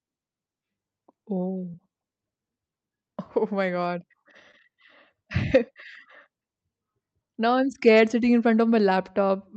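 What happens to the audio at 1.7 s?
From about 1.71 to 1.76 s, roughly 20 ms of the call's audio arrived too late for the decoder, a short concealed packet loss. The receiver covered the gap by extending the preceding sound, repeating its pitch if it was voiced or substituting shaped noise if it was not, and then blended back into the real signal. This produces a brief smear or wobble lasting a few hundredths of a second.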